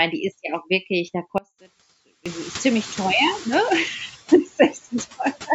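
Noise suppressor artifacts run through the whole clip. The suppressor estimates which frequency bands hold steady noise and pulls them down frame by frame, here by about 10 dB. So the background sinks in the gaps between words and swells back up underneath the speech. That pumping of the noise floor is audible all through. It stands out more once the room noise rises by about 24 dB, at roughly 1.5 s.

An audio dropout to a faint residue follows at 1.38 s, right after "ja auch wirklich da". The speech vanishes abruptly for about 0.87 s. Only a faint trace remains in the gap, roughly 25 dB below normal level. It is not a pause or a fade. The wanted signal was most likely lost upstream while the path after it stayed live. Speech snaps back at 2.26 s with "ziemlich teuer ne".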